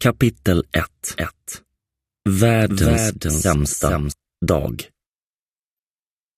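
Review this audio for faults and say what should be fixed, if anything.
From 1.16 to 4.12 s there is a doubled audio track: a second full-band copy, about 5 dB quieter, trails the original by roughly 0.4 s and starts and stops abruptly. The likely cause is a slower capture path or a misaligned edit. Unlike a room echo, it has no decay or reverberant colour. To prevent it, route the source through a single capture path and check edits for overlapping duplicate regions.

At 3.65 to 3.70 s, DAB burbling is heard as brief blips of noise over the sound. This matches weak reception letting a small fraction of bit errors slip past error correction into the MP2 data, so wrong samples put short noise blips into single sub-bands. The span of about 40 ms fits roughly three frames. It differs from a plain dropout because the sound keeps going under the blips instead of falling silent. To prevent it, improve the DAB signal strength or take the feed from a wired or higher-margin source.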